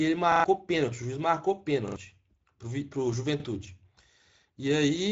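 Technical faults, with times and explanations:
Throughout, Speex codec: the sound is plainly hoarse and noisy, with nothing above 7.7 kHz. This fits a mid-rate Speex setting near 17 kbps, where too few bits describe the excitation, so the upper band becomes a shaped, noise-like fill.
0.32–0.44 s, 1.88–1.96 s and 3.40–3.44 s, repeated buffer: a short piece sounds again three, two and then one extra time, with a hard join at each repeat. This fits a 40 ms buffer replayed when fresh audio arrived late, so each stutter replaces roughly 100, 70 and 40 ms of sound.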